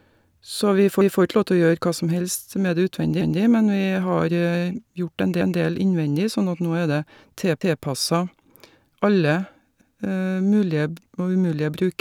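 Overlapping chunks stutter the speech at 1.01, 3.21, 5.41, 7.61 and 9.81 s. Each 2 s chunk starts early, so 200 ms replays at every join.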